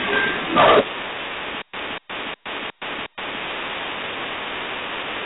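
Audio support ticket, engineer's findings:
G.726 ADPCM throughout: rasping hiss tracking speech level, heavy damage, nothing above 3.9 kHz, consistent with 16 kbit/s. Spectrogram: hard ceiling, grainy noise filling speech bands.

Hard clipping, 0.04–0.81 s: harsh fuzz on loud syllables, about 15 dB overdrive at a gain stage. Waveform: flat-topped peaks; spectrogram: harmonic smear up to band edge.

Stutter with silent gaps, 1.62–3.42 s: 243 ms burst repeated five times, 117 ms digital silence between, 361 ms period. Likely a stalled player or stream. Waveform: identical blocks with flat gaps.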